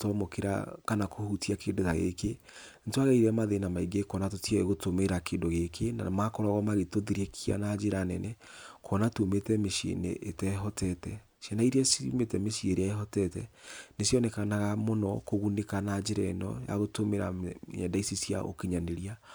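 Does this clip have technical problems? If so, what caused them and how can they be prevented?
No, this clip has no technical problems, so there is nothing that needs preventing.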